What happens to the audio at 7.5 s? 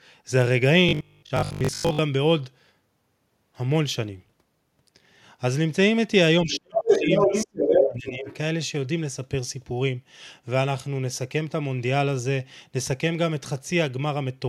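Other side's voice leaking through, from 6.87 to 7.89 s: a second voice rises alongside the talker, a little louder than the talker's own speech. This is likely a loudspeaker echo that the echo canceller failed to strip from the microphone, so the far end's speech returns into the signal. It sits on top of the talker rather than replacing it, so the two voices overlap at 7.5 s.

Speech suppressed in double talk, from 7.45 to 8.26 s: while that second voice is present, the talker's speech is pushed down, falling by as much as about 30 dB and affected across most of the span. With both sides talking at once, the echo canceller likely could not tell the talker apart from the returning echo and attenuated everything together. The talker's voice therefore dips around 7.5 s.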